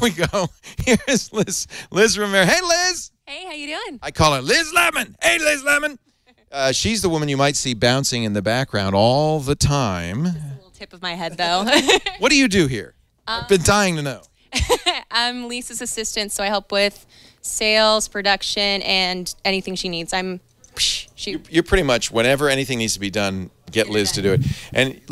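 No audible technical faults.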